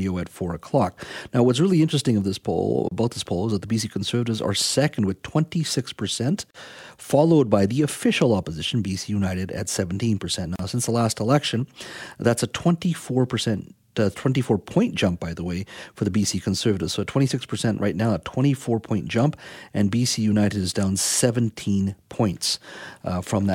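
Gaps at joins of encoded pieces occur at 2.89 to 2.91 s, 6.51 to 6.54 s and 10.56 to 10.59 s, lasting 27, 39 and 36 ms. The speech was encoded in separate runs and joined untrimmed, so each join keeps the encoder's start-up delay and final-frame padding as silence. Each gap is a brief dropout with its edges smeared by the codec: after "interesting of this poll", before "followed by the official", and before "since the last election", with speech resuming where it stopped.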